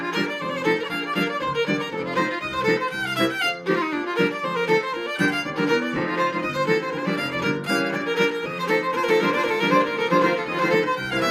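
From 9.09 to 10.75 s there's a doubled audio track. A copy about as loud trails roughly 400 ms behind and starts and stops abruptly, likely from a slower second capture or an out-of-step edit.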